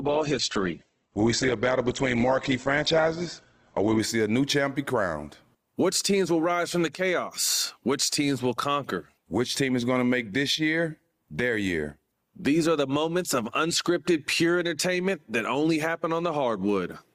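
From 0 to 4.0 s the speech plays as an adaptive stream starting at a low bitrate: nothing above 8.3 kHz, smeared codec texture, fitting roughly 12 kbit/s Opus. At 4.0 s it jumps cleanly to fuller treble, without a gap, unlike a mid-stream dropout.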